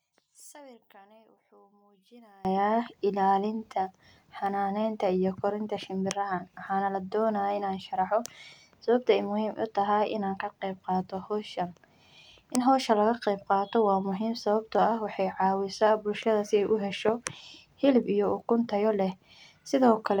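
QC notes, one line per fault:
0.0–2.45 s, one channel inverted: speech drops about 29 dB to a faint residue in mono, likely from reversed polarity on one channel cancelling the other.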